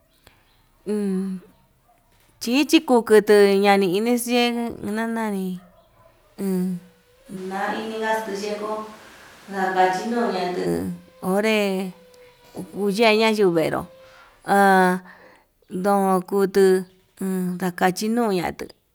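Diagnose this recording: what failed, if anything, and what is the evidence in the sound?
From 7.38 to 10.65 s the speech suddenly goes roomy and hollow, loses bass, drops about 5 dB, and picks up room noise roughly 25 dB under it, then snaps back. That's likely a switch to a distant microphone after the close mic's signal failed or was left out.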